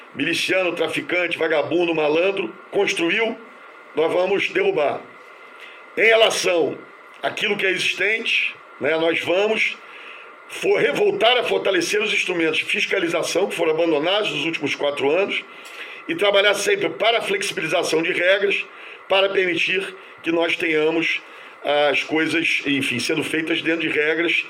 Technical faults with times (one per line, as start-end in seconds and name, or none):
none